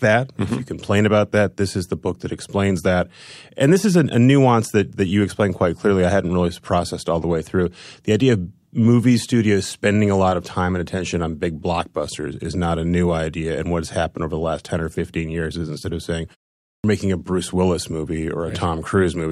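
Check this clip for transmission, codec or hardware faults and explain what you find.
One fault is audible: a clipped start after a pause at 16.77 to 16.84 s. After about half a second of silence following "is instead of saying", the output path appears to have idled and needs time to resume. The first 71 ms of the next phrase are lost, so the sound before "making a" begins abruptly without its opening.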